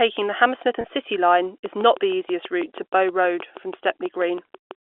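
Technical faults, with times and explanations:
0.81 s, packet loss with pitch repetition: about 30 ms of audio went missing, which points to a single dropped packet, and the receiver filled the gap by repeating the last pitch period, so the speech briefly holds on a slightly buzzy, sustained tone before carrying on.
1.66–4.72 s, train of clicks: a steady ticking runs at about 6.2 clicks per second, evenly spaced, around twenty in all, peaking roughly 5 dB above the speech. The regular pulses likely come from interference or a faulty connection, and they carry through the pauses over the telephone-band G.711 sound.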